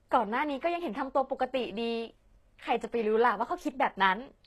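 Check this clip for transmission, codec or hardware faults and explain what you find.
There's one problem, and it runs the whole length of the speech: low-bitrate audio saved at a high bitrate. Nothing comes through above about 12.3 kHz, and the artefacts of the first encoding are still there. The likely cause is a low-bitrate encode, consistent with something like HE-AAC around 16 kbit/s, later re-saved as a high-rate MP3. The bigger file can't bring back what the first pass discarded, so the damage stays baked in.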